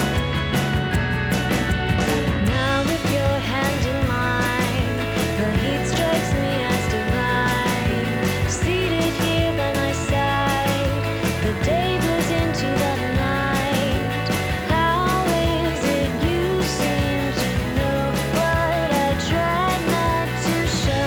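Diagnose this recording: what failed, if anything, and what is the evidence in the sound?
Compressed frames skipped at 9.74 s, at the codec stage. The audio jumps forward by roughly 70 ms, which fits two missing 32 ms frames that were either absent from the file or rejected by the decoder as damaged. The decoder resumes at the next good frame, and the lost material simply never plays.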